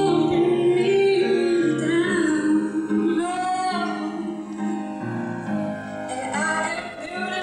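Throughout the clip the channels are drifting apart: the left and right sides come from devices running on separate clocks, mismatched by around 200 parts per million, so the delay between them slides steadily to about one and a half milliseconds. Folded to mono, comb notches sweep slowly through the spectrum, heard as a gradual flanging.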